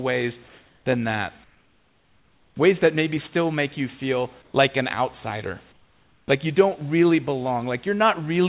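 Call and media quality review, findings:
Comfort noise in place of the background at 1.44–2.56 s, 4.42–4.54 s and 5.72–6.28 s. Likely sender discontinuous transmission: voice detector halts audio in pauses, receiver synthesises shaped noise. Room background becomes flat, featureless hiss, about 8, 2 and 7 dB quieter, until speech resumes.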